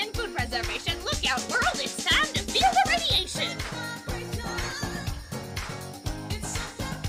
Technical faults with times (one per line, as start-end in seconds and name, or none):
4.05-5.71 call bitrate drop